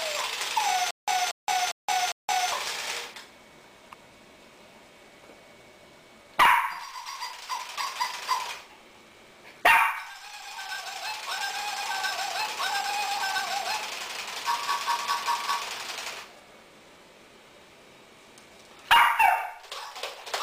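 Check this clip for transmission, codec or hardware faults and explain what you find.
One fault turns up: a stutter with silent gaps from 0.91 to 2.52 s. A 233 ms burst of sound repeats four times, each followed by about 171 ms of dead digital silence, giving an even 404 ms pulse. The likely cause is a stalled player or stream replaying its last buffered fragment on each retry, so the audio meant for that stretch never plays.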